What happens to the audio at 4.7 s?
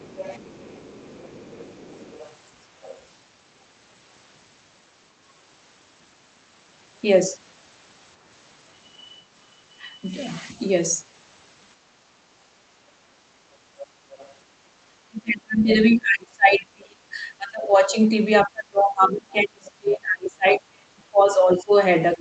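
Nothing goes wrong at 4.7 s: the speech there is intact, carried through the call path without any dropout, glitch or distortion.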